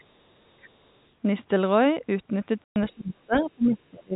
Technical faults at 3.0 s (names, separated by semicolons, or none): other side's voice leaking through; speech suppressed in double talk